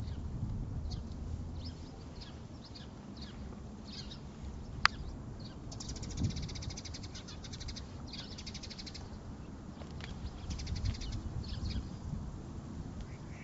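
No faults are present; the audio shows only the expected signature of call microphone processing, with the lowest bass trimmed by its high-pass filter and nothing above 8 kHz.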